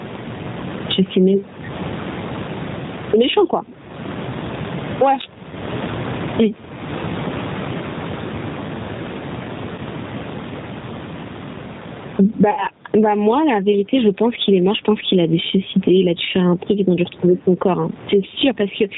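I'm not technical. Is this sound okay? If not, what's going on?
No. Three problems can be heard.

The first is gain pumping. The recording level was most likely set far too high, so an automatic level control keeps pulling the volume down hard whenever the speech gets loud and lets it back up in the pauses. Everything sounds squashed and breathing, with a large swing in level all the way through.

The second is the G.729 codec, a phone-call compression scheme that doesn't send the actual sound. It sends a compact description of the voice and rebuilds the speech at the other end. The damage is plainly audible throughout. The speech stays understandable but sounds rough, slightly robotic and dull, because the crisp upper part of the sound is cut off.

The third is VoIP packet loss concealed by the speech codec. Small chunks of the call never arrived, so the decoder guessed by stretching out the last sound it had and fading it. 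This happens three times. About 20 ms was lost at 5.50 to 5.54 s, another 20 ms at 9.76 to 9.80 s, and about 60 ms at 12.51 to 12.66 s. At each point the speech briefly turns buzzy or blurred, and it stays weak for a moment afterwards. The last dropout is the longest.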